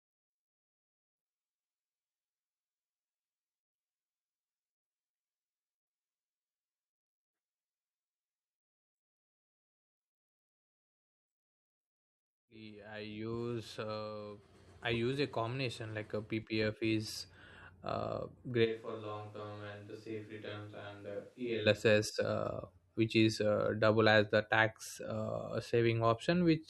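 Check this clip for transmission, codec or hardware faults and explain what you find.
One fault turns up, a switch to a distant microphone from 18.66 to 21.65 s. The close microphone's feed likely dropped out, leaving a farther pickup. The voice turns hollow and roomy, about 10 dB quieter, with thinner bass and room noise roughly 30 dB below the speech. On a waveform the envelope shrinks abruptly. A spectrogram shows a weaker low end, a raised noise floor and smeared reverberant tails, with sharp boundaries at both switches.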